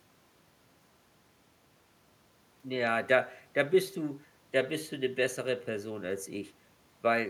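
No technical faults are audible.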